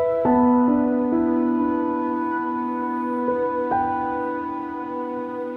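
No faults found in this audio.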